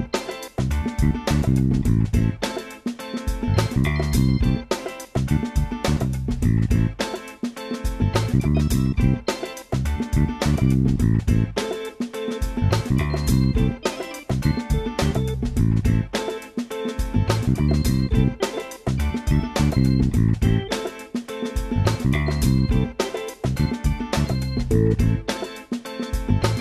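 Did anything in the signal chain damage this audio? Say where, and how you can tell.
No, nothing in the signal chain has damaged this audio. No stage from capture to playback leaves an audible mark anywhere in the clip.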